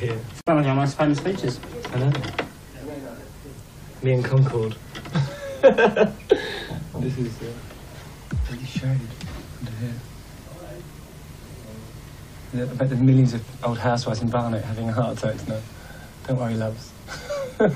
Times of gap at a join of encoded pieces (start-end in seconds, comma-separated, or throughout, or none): 0.41-0.47